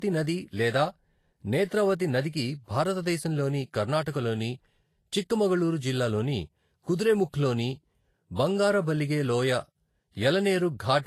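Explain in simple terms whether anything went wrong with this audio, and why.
Something did go wrong, throughout the whole recording. Nothing is heard above about 14.2 kHz, so the speech lacks its finest crisp detail. This is likely low-bitrate audio saved at a high bitrate: a heavily squeezed copy was re-saved as a large file, which cannot restore what was already discarded.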